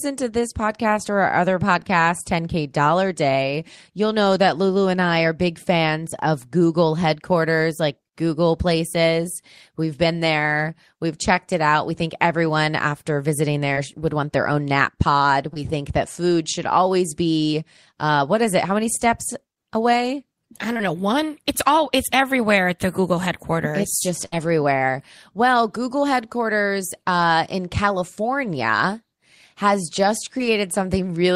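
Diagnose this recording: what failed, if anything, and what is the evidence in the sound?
The network path dropped audio, heard as short concealed packet loss at 15.54 to 15.57 s, at 20.73 to 20.81 s (two back-to-back gaps between "many steps away I" and "know one"), and at 30.38 to 30.41 s after "has just". Each gap loses about 20 ms, which the decoder patched by extending the preceding sound, so it comes across as a brief smear or wobble. A spectrogram would show harmonics stretched flat and then a soft crossfade back into normal texture.

A burst of packet loss at 24.25 to 24.34 s removes about 60 ms of audio in a row. The receiver bridged it by repeating the last sound for roughly 66 ms while fading it down, heard as a short held buzz or hiss before the audio picks up further along. On a waveform the envelope sags smoothly rather than dropping to zero. On a spectrogram a frozen, dimming band of partials sits where the missing segment should be.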